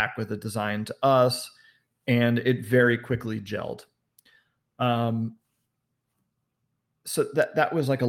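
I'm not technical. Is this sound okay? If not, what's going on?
No. Right after "design to us and", at about 2.53 s, there's a call bitrate drop lasting until about 7.95 s. The connection squeezed the audio into far fewer bits, so the speech turns rougher and duller, at its worst for a stretch of roughly two and a half seconds.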